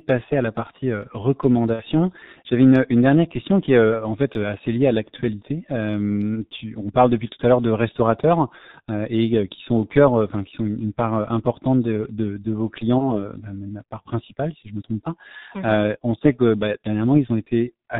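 The whole recording has passed through the G.723.1 codec, and the heavy coding damage fits its 6.3 kbit/s mode. The codec models speech in 30 ms frames and keeps nothing above 4 kHz, so the speech sounds muffled and hoarse. Its voice model adapts slowly, which smears consonant onsets into one another.

From 1.73 to 1.83 s there is VoIP packet loss concealed by the speech codec, consistent with two lost 30 ms frames covering about 60 ms of signal. The decoder repeats its last pitch and filter settings at decreasing gain, so the sound is stretched into a brief, fading buzzy tone or coloured noise. A second loss follows at 12.98 s, just after "part importante de vos", where a single 30 ms gap is concealed the same way. Because each decoded frame depends on the previous one, the speech stays weak or distorted until about 13.28 s.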